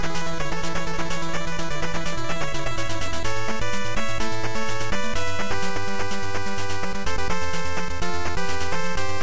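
No technical faults can be heard anywhere in this audio.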